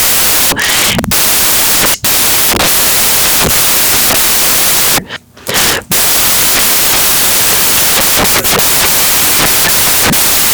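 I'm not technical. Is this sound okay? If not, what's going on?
No. From start to finish, the speech is buried under loud hiss, like static from a badly tuned radio. This is a case of samples built from the wrong bytes. Digital sound is stored as numbers, each made of small pieces. Here the player joined those pieces wrongly. The tiny, jittery parts of each number became the big parts. That turns the sound into noise.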